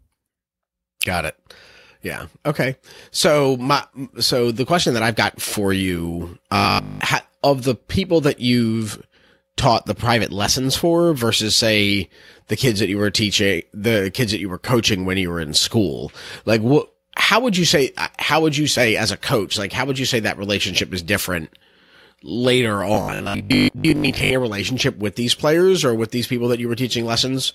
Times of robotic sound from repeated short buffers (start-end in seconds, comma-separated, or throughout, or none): 6.57-7.01, 22.94-24.34